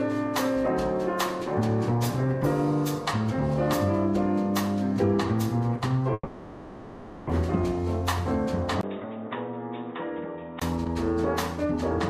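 From 6.13 to 7.31 s there is a long network dropout, likely caused by stalled packet delivery. The last sound is stretched into a fading buzz, then near-silence, and about a second of audio never returns. Playback resumes shifted by roughly 150 ms.

At 8.81 s a 20 ms gap marks the input switched to a poorer device, likely a headset call profile. Until 10.62 s the sound turns dull, with nothing above 3.8 kHz, drops about 10 dB, and carries faint new noise roughly 55 dB down.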